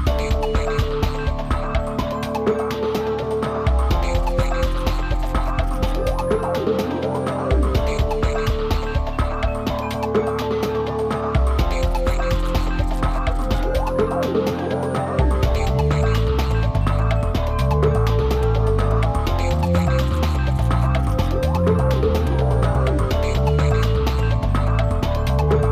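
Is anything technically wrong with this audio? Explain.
No, nothing technically wrong.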